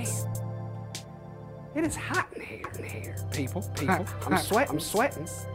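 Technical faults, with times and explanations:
2.64 s to the end, doubled audio track: a second full-band copy of the sound enters abruptly about 0.4 s behind and at roughly equal loudness, with no decay or room colour. This is likely a second capture through a slower path mixed back in.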